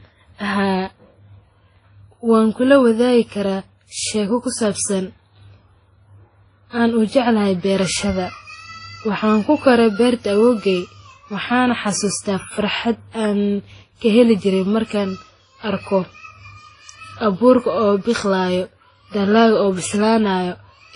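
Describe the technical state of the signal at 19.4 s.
At 19.4 s the speech carries the same degradation present across the whole clip, most likely transcoding between lossy codecs. Nothing is heard above about 10.6 kHz, and that ceiling from one stage persists through the others. The artefact textures stack, which points to a chain along the lines of WMA at about 32 kbit/s, then MP3 near 39 kbit/s, and finally Vorbis around 23 kbit/s, each re-encoding the previous stage's smearing and adding its own.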